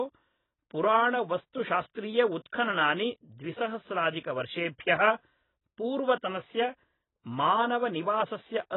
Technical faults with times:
0.00-8.76 AAC compression

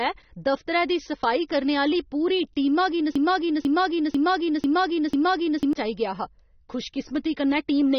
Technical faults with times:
0.00-7.98 AAC compression
3.15-5.73 broken-record loop

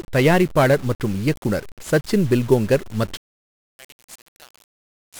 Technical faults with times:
0.00-5.20 1-bit DFPWM compression
3.17-5.20 one channel inverted

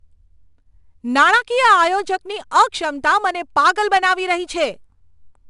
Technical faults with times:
0.00-5.49 4-bit ADPCM compression

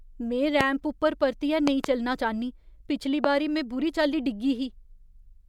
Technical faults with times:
0.61-0.63 loud pop
1.67-1.86 loud pop
3.24-3.26 loud pop

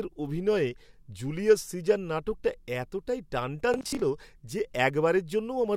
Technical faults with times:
3.74-4.02 Bluetooth stutter

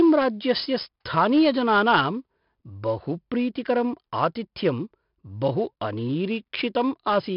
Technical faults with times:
0.00-7.37 4-bit ADPCM compression

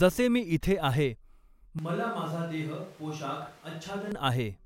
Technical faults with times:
1.79-4.12 switch to a distant microphone

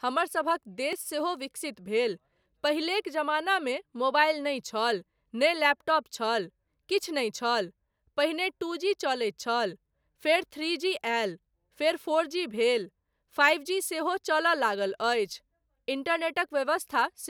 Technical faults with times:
0.93 block of digital silence

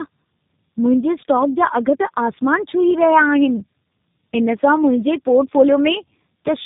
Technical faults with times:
0.00-6.65 tandem speech coding

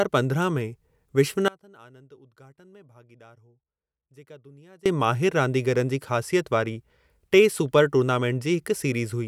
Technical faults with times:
1.48-4.86 audio dropout to a faint residue

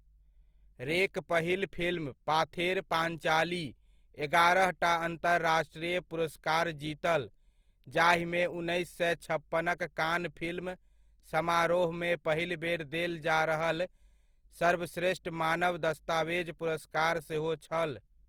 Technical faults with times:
0.00-18.28 Opus compression

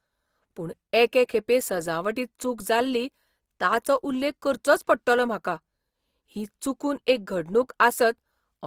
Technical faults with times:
0.00-8.66 Opus compression

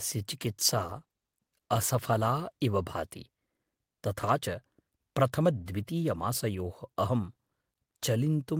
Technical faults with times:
0.43-2.61 call bitrate drop

